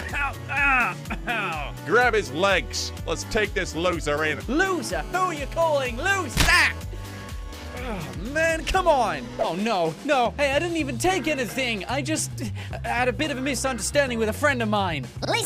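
GSM phone buzz runs from 4.66 to 6.80 s: a nearby 2G phone on a call transmits in bursts 217 times a second, and the audio circuit rectifies those radio pulses. The result is a steady, hard, raspy 217 Hz buzz, rich in harmonics and unrelated to the sound, about 20 dB below it.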